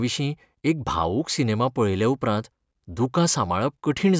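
No technical faults occur at any point in the recording, so there is nothing to describe in time order.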